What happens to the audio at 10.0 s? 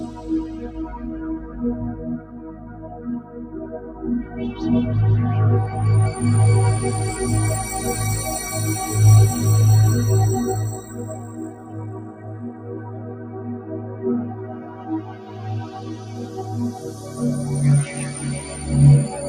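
At 10.0 s you're hearing the noise suppressor applied to these sounds, running the whole clip: it treats sustained parts as noise, ducking them around 15 dB, so tails pump and thin.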